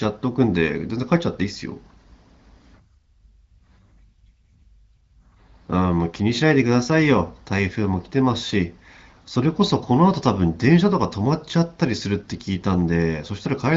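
Speech clip, no technical faults.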